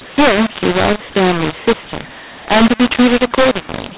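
mu-law and A-law mixed up, from start to finish: the speech was encoded with G.711 mu-law, the fixed-line telephone format at 8,000 samples a second, but decoded as A-law. Because the two logarithmic curves assign different levels to the same 8-bit codes, amplitudes come back scrambled, some too loud and others too soft, and the quietest samples are lifted well above silence. The speech sounds harsh and distorted, and the pauses fill with noise.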